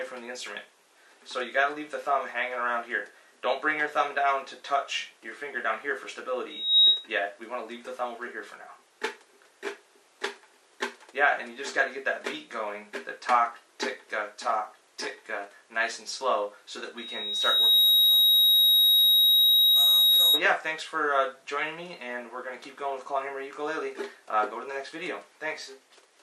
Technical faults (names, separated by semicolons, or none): loudspeaker feedback squeal